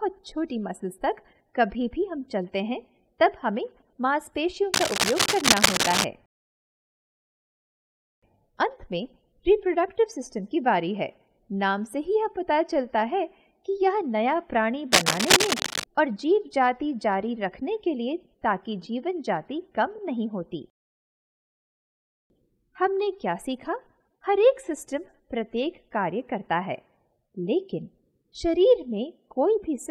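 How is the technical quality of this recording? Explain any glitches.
The recording has two bursts of cable scratch noise. The first runs from 4.74 to 6.05 s, roughly as loud as the sound itself, and the second from 14.92 to 15.86 s, a little louder than the signal. Both are dense, uneven, scratchy rustling laid over the audio. The likely cause is a worn cable, connector or control carrying DC being moved, so its contact resistance jumps around rapidly and injects those ragged noise bursts.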